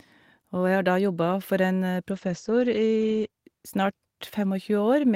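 From 2.13 s to 3.35 s there is a call bitrate drop: the bandwidth estimate fell and the encoder was pushed to spend far fewer bits. For about 1.14 s the speech is coded coarsely, sounding rough and watery, which fits a fall from around 32 kbps to about 13 kbps. The top end also narrows from a full 20 kHz to 8 kHz, so the speech turns muffled until the bitrate recovers.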